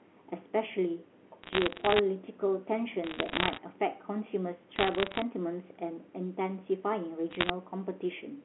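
From 1.44 to 1.99 s, 3.04 to 3.58 s, 4.76 to 5.22 s and 7.31 to 7.50 s, bit errors on the digital phone line scatter sharp ticks across the telephone-band speech. Roughly one bit in a hundred or fewer is flipped, and the last burst is the densest. Each flip corrupts a single sample, so the result is crackle laid over unchanged speech, with no dropouts, muting or smeared syllables as packet loss would cause.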